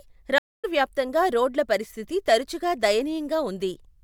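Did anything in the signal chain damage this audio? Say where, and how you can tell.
Yes, a network stream reconnect at 0.38 to 0.65 s: 253 ms of silence, then a fresh decoder resumes roughly 0.3 s later, skipping material a plain dropout wouldn't.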